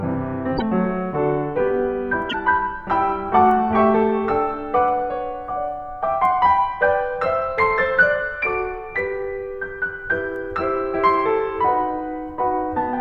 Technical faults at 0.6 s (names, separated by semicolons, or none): broken MP3 bit reservoir